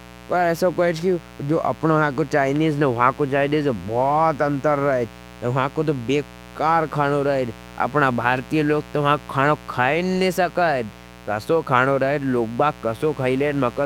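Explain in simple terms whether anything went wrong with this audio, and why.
Electrical interference from the 60 Hz mains supply leaked into the recording. This mains buzz puts a steady, raspy noise clearly beneath the speech for the whole clip.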